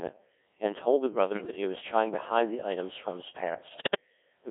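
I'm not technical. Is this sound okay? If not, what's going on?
No. Throughout, the speech sounds heavily robotic, buzzy and thin, because it passed through a Codec 2 vocoder, which rebuilds the voice from a few measurements rather than keeping the original sound.

From 1.33 to 1.56 s and again from 3.68 to 4.01 s, the voice jumps and warbles into garbled bleeps. These are bit errors on digital voice radio, where a weak signal corrupts the data that tells the decoder how to rebuild the voice.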